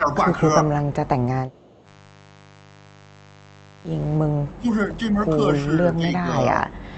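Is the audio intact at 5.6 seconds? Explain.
No. A mains buzz runs through this moment: a steady, raspy 50 Hz buzz about 25 dB below the speech. Its switching spikes add harmonics that make it coarser than a pure low hum.

From 5.61 to 5.65 s there is a brief echo leak, a faint copy of speech delayed by 309 ms and about 25 dB down. It was likely left by a loudspeaker echo the canceller missed. The delay sets it apart from room reverberation.

From 5.67 to 6.43 s comes speech suppressed in double talk. The level dips by up to roughly 5 dB across about half a second, likely because the canceller turned the talker down along with the echo. These are partial dips, not full dropouts.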